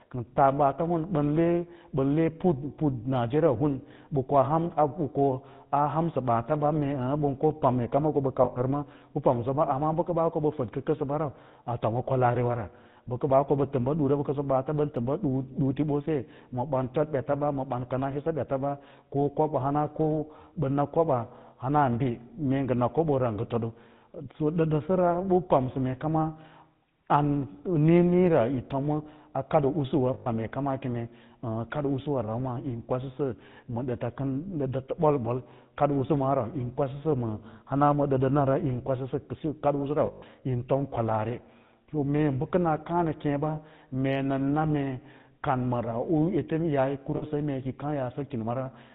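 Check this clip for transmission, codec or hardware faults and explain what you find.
The speech here carries GSM full-rate codec damage throughout, with lost GSM frames in four places. The codec rebuilds the voice from a vocal-tract model driven by sparse pulses and cuts everything above 4 kHz, so the whole clip sounds dull, buzzy and gravelly, which fits a 13 kbps GSM stream.

The lost GSM frames fall at 8.44 to 8.6 s just before "bə pamsa", at 30.14 to 30.27 s just before "mee kama keme", at 40.06 to 40.23 s between "edsiyi kadi usu" and "yin tom kwalaari", and at 47.16 to 47.24 s. These gaps run from 60 to 160 ms. In each one the decoder repeats the last good frame's settings, so the sound hangs on as a brief rough, metallic ring.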